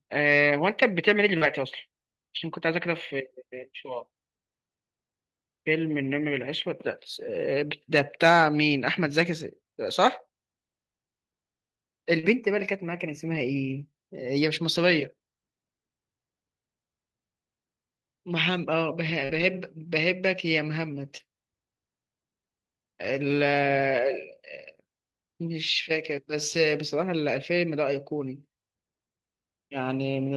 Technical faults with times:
1.37-1.43 short concealed packet loss
1.41 lost packet rebuilt from error correction
12.19-12.25 short concealed packet loss
12.23-12.25 lost packet rebuilt from error correction
13.35 lost packet rebuilt from error correction
14.91 lost packet rebuilt from error correction
19.25-19.31 short concealed packet loss
19.29-19.43 lost packet rebuilt from error correction
21.17-21.21 short concealed packet loss
21.19 lost packet rebuilt from error correction
27.33 lost packet rebuilt from error correction

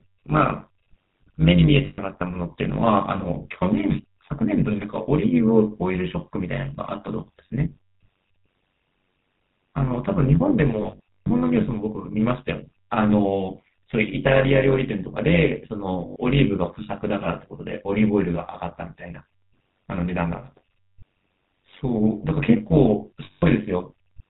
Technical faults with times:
0.00-24.29 GSM full-rate codec
0.00-24.29 overlap-add ripple
1.86-1.99 lost GSM frames
10.82-11.31 lost GSM frames
16.06-16.16 lost GSM frames
23.24-23.43 lost GSM frames

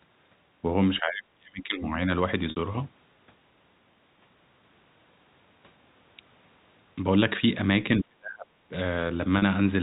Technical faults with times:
1.00-2.10 speech suppressed in double talk
2.50-2.56 packet loss with pitch repetition
7.99-8.76 speech suppressed in double talk
9.38-9.42 packet loss with pitch repetition

